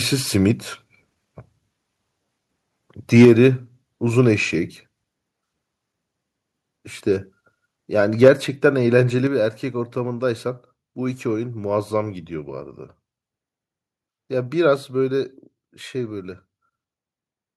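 From 3.15 to 3.46 s and again from 8.23 to 8.28 s the speech crackles harshly, likely microphone overload: peaks pushed about 4 to 5 dB past the converter's limit and had their tops flattened. Distortion on the loud syllables themselves distinguishes it from a plain level change. At 3.25, 8.28, 9.27 and 14.76 s, voice and background drop together, by about 4 dB the first three times and about 2 dB the last, likely the microphone volume stepped down by software reacting to a loud or clipping input. Each step is a clean, sudden drop with no added distortion.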